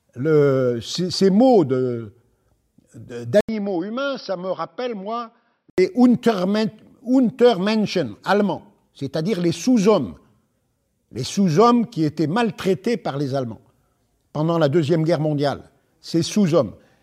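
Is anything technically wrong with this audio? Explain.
Yes. From 3.41 to 5.78 s, after an 80 ms gap, the speech turns dull and about 10 dB quieter, with nothing above 5.7 kHz and faint new background noise. The recording likely switched its input to a poorer device, a narrower-band microphone with its own noise floor. The silence at the switch and the new noise rule out a simple filter change.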